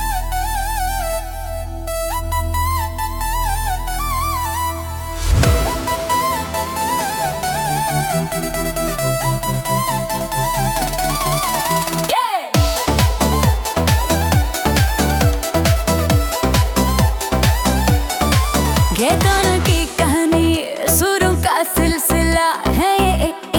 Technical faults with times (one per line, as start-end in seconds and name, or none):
none